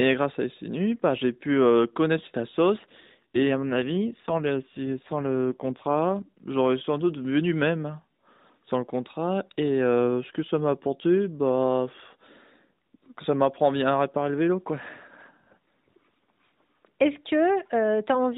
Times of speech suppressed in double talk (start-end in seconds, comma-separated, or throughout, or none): none